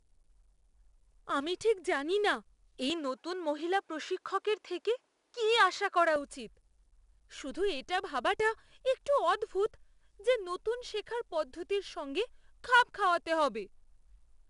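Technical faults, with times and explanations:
throughout: 4-bit ADPCM compression. Every loud stretch of speech carries a gritty hiss that rises and falls with the level, and sharp attacks are distorted because the adaptive step size lags behind sudden changes. Nothing is present above 10.6 kHz, and the overall grain fits a rate of around 89 kbps. Unlike transform codecs, there is no swirling or warbling. The noise is plain broadband error tied to the signal's own loudness.
2.90–6.16 s: input switched to a poorer device. Right after "আমি ঠিক জানিনা এই", the speech abruptly narrows to nothing above 8 kHz. The level shifts by around 5 dB, and a faint new background noise appears, roughly 50 dB below the speech. The full band returns at 6.16 s. A brief change of microphone or headset profile is the likely cause. Unlike a dropout, the switch has no gap, and unlike a steady low-pass filter, the tone changes only for this span.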